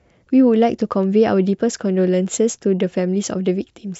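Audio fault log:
No faults detected.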